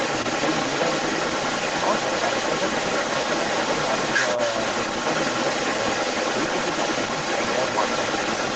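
From the very start to the end of the clip, a second voice runs alongside the talker, roughly 5 dB louder than the main speech. This is the other side's voice leaking through, likely because the device played the far end on its loudspeaker and the echo canceller failed to strip that playback out of the microphone signal. Everything sits within a band topping out near 8 kHz, which fits a wideband Opus call.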